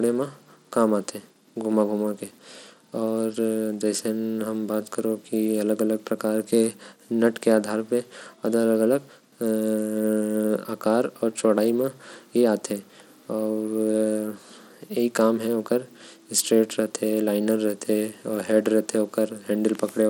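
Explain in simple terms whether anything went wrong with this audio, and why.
The speech sounds gritty and rough from start to finish. The high, crisp parts of the voice come and go. This is likely Bluetooth SBC compression. The wireless link squeezed the sound hard, giving too few bits to the treble.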